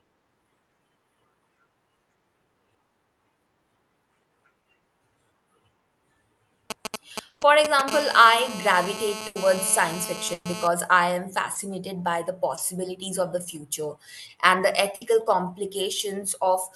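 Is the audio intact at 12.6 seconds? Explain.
No. A short concealed packet loss runs from 12.55 to 12.59 s. About 20 ms of audio never reached the decoder in time. The receiver extended the preceding sound to fill the gap, then blended back in. It is heard as a brief smear or wobble.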